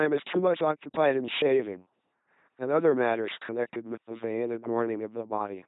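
A speech clip passed through an LPC-10 vocoder for its whole length, heavily damaged, with nothing above 3.9 kHz. The voice is rebuilt from a ten-pole vocal tract filter driven by either a pulse train or noise, giving a buzzing, robotic tone that fits a 2.4 kbit/s stream. Unlike a plain narrowband telephone codec, which keeps natural timbre, each moment here flips wholly between buzz and hiss, with buzzes or hiss wherever the voicing decision is wrong.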